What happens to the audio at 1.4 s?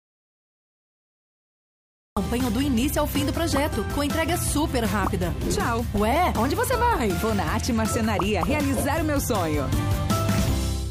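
At 1.4 s the clip is in the middle of an audio dropout to silence that is already under way when the clip begins and lasts until 2.17 s. The signal there is silence, with no room tone or background at all, and sound only appears at 2.17 s. The likely cause is a lost input, such as a disconnected device or a failed link, while the recorder kept writing silence, so anything in that span is gone.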